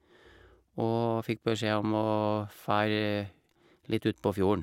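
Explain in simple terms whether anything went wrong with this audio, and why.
Nothing went wrong here: no audible fault turns up anywhere in the speech.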